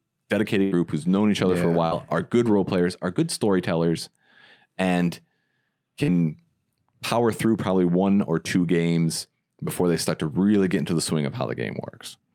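A burst of packet loss runs from 0.63 to 0.74 s, just before "who's known each other". About 80 ms of audio never arrived, and the receiver stretched the preceding sound over the gap while fading it. The result is a brief held, dimming tail, and then the speech jumps ahead with 80 ms gone.

Short concealed packet loss appears at 1.87 to 1.94 s, between "other yeah for a" and "are good role players", and again at 6.03 to 6.11 s. Each time roughly 40 ms failed to reach the decoder, so the receiver synthesized a continuation of the last sound and blended it back into the real audio, producing a quick smear or wobble.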